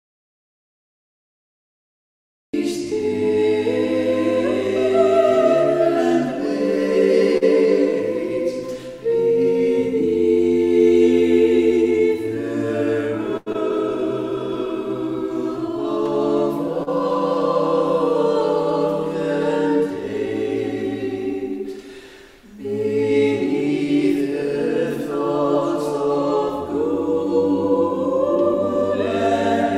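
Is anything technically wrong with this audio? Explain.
Yes. There are four kinds of fault.

The audio starts in an audio dropout to silence that lasts until 2.54 s. The gap is silent, with no room tone. This is likely a lost input, with the recorder still writing silence. Whatever happened there is gone.

Two short stalls from a late packet occur, at 7.37 to 7.43 s and 13.37 to 13.48 s. Each time a packet arrived late and the buffer ran dry. The last sound is held, for 41 ms and then 92 ms, with a slight buzz or dip. Nothing is lost.

From 11.70 to 12.01 s there is a jitter buffer speed-up. The receiver trimmed short pitch-period pieces to reduce a backlog, about a twentieth of a second in all. The sound runs at 116% speed without a pitch change, so it feels briefly hurried.

Two short concealed packet losses occur, at 13.52 to 13.56 s and 16.83 to 16.89 s. Each lost 40 ms of audio. The decoder extended the previous sound to cover the hole, then blended back in. 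Each one is heard as a brief smear or wobble.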